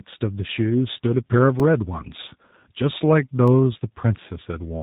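Tandem speech coding runs through the whole clip. The speech passed through at least two speech codecs in a row, and the final stage sounds like G.729A at 8 kbit/s. Each border decoded the audio and coded it again, so every coder worked on damage the previous one had already done. The stacked losses make the speech rough, muffled and warbly, and nothing remains above 3.8 kHz.

A block of digital silence occurs at 1.6 s, lasting 2.0 ms, and another at 3.48 s, lasting about 0.46 ms. In each, a run of samples was replaced by zeros, so the audio drops straight to silence and returns with no fade. Because the blocks are so short, each is heard as a tick rather than a hole.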